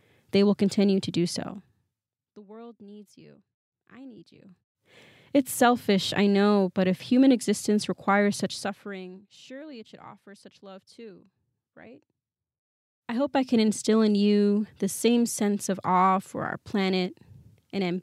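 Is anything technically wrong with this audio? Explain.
No, nothing technically wrong turns up in this speech recording.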